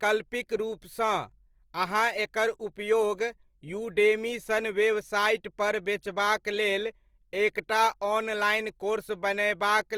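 From start to finish the speech carries a rough, grainy texture, with detail turning to noise. This is likely Opus compression in its music mode, which fits a rate near 24 kbps. Starved of bits, the encoder keeps each band's energy but refills the fine detail with folded or noise content, so little swirl appears. Bandwidth stays wide, reaching about 20.3 kHz.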